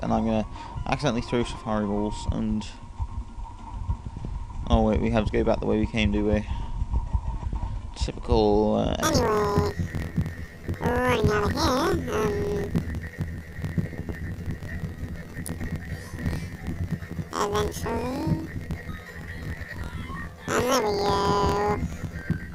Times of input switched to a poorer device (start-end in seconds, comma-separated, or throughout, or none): none